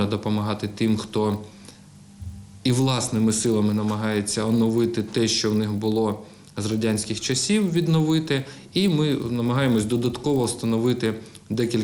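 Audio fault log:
Throughout: resampler restarted on every block. Each 20 ms block gets converted on its own (the sound suggests 24 kHz up to 48 kHz), so every block edge picks up a small error, heard as a 50 Hz buzz riding under the signal whenever there's sound.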